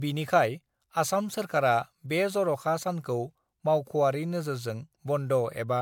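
Throughout this speech recording the sound has a swirly, smeared, hollow quality, with consonant attacks blurred and a watery noise riding under everything, more damage than a single moderate-rate encode would leave. That pattern is generation loss, most likely from the audio being decoded and re-encoded about three times, consistent with MP3 at around 128 kbit/s. Each pass requantises on a shifted frame grid, so noise and spectral gaps accumulate.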